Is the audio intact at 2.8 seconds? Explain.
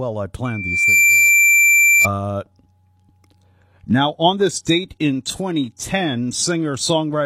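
Yes, the speech at 2.8 seconds is intact, with no dropout, click, distortion or other fault audible at that moment.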